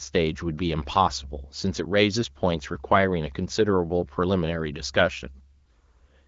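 The speech clip, carried over the AMR wideband (HD Voice) codec at 15.85 kbit/s, has nothing technically wrong with it.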